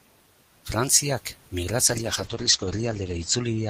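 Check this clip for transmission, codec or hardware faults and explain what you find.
One transmission fault is present: a call bitrate drop starting at 1.89 s and lasting to the end of the clip. The bandwidth estimate collapsed, so the encoder fell from 32 kbps to 10 kbps, staying at its lowest for about 1.4 s. At that rate Opus quantises far more coarsely and narrows its coded band from 20 kHz to 8 kHz. The speech turns muffled and rough or watery. On a spectrogram, energy above 8 kHz vanishes after the drop, leaving a flat ceiling, while the waveform envelope shows little change.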